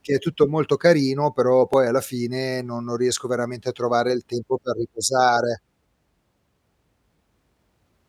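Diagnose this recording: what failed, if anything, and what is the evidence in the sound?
Clicks every 2.02 s from 1.74 to 7.82 s, after "tutto molto carino però": likely clock drift buffer slips, mismatched clocks forcing buffer sample drops or repeats.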